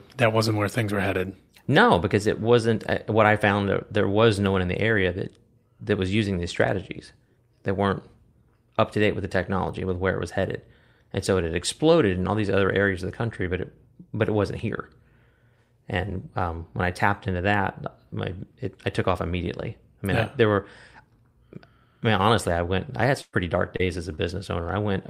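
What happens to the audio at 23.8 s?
A short concealed packet loss occurs from 23.77 to 23.81 s. About 20 ms of the speech stream failed to arrive at the decoder in time, and the receiver patched the gap with roughly 21 ms of synthesized audio, extending the preceding sound from its pitch, or as shaped noise if unvoiced, before crossfading back into the real signal. The result is a brief smear or wobble at that point, and any quick consonant falling inside it can disappear.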